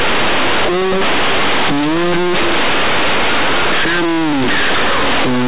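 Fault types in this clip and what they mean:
Companded audio read as linear: mu-law telephone bytes are played as plain linear 8-bit samples with no expansion, so each sign change jumps across about half the output range. Quiet parts become as large as loud ones, giving loud, buzzy distortion and noise in pauses throughout.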